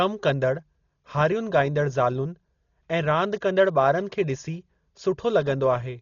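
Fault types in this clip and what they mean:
Dolby Digital compression: throughout, the speech sounds dull, with nothing above 6.9 kHz and rough, fluttering noise around tones. This is likely low-bitrate AC-3 coding, which narrows the band and fills frequency lines it gives no bits with dither noise. The heavy damage fits about 32 kbps.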